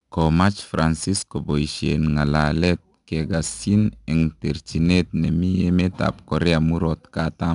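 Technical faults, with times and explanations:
throughout, 4-bit ADPCM compression: gritty hiss that swells with every loud syllable and roughens sharp attacks, unlike steady background hiss; nothing above 10.6 kHz.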